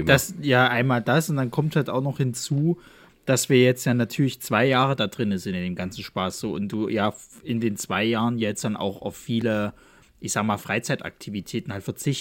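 At 9.41 s, after "jetzt dann auch auf", a 1.8 ms block of digital silence cuts out abruptly, heard as a tick: a flat waveform gap and a thin broadband spectrogram stripe.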